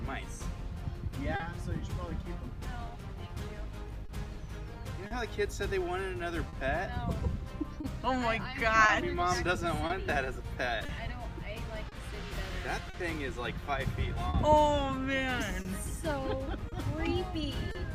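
The sender's clock runs roughly 3% slower than the receiver's, a clock drift between sender and receiver that persists throughout. The receiver's jitter buffer keeps draining, so small timing hiccups recur at uneven intervals across the whole clip.

From 1.12 to 4.04 s the receiver makes repeated timing corrections, slowing playback to 99% and padding in roughly 40 ms of extra material. Each adjustment is tiny, so the effect is a slightly unsteady, dragging tempo rather than distinct clicks.

Within that stretch, at 1.36 s, comes the first short stall from a late packet. The buffer ran empty, and the last sound was held for 40 ms until the packet arrived. Similar stalls follow at 4.06 s (30 ms), 5.07 s, 6.49 s and 14.30 s (40 ms each). Nothing is lost, but each moment sounds briefly frozen, with a faint buzz or dip.

Scattered short gaps appear from 7.81 to 12.96 s and again from 15.62 to 17.77 s. 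They are around seven in the first span and three in the second, none longer than about 40 ms. The receiver bridged each one by extending the preceding sound, leaving small ticks and smears.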